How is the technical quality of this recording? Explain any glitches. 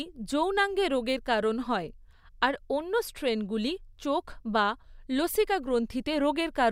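No glitches or faults heard.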